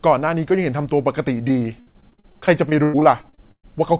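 Repeated packet loss (robotic sound) runs from 1.48 to 3.70 s in this speech. About twenty holes open up, the longest 119 ms, each patched by stretching the previous sound. Nearly a third of the stretch is filled this way, giving choppy, robotic speech over narrowband audio with nothing above 4 kHz, consistent with a G.711 call path.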